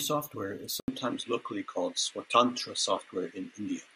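At 0.8 s the input likely switched to a poorer device: an 80 ms silence marks the change, then the speech loses everything above 11.4 kHz, shifts level by a few decibels and gains a faint new background noise, through to the end.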